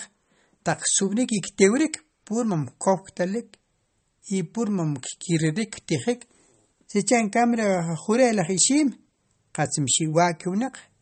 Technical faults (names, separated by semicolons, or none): MP3 compression